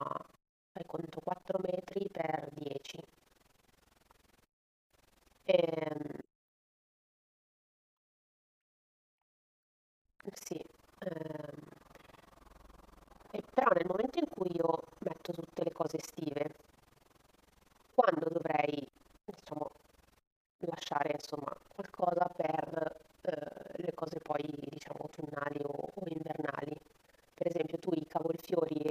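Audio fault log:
throughout, overlap-add ripple: a harsh robotic tremolo about 20 times a second, because windowed speech frames overlap unevenly, swinging the level by about 60 dB per frame.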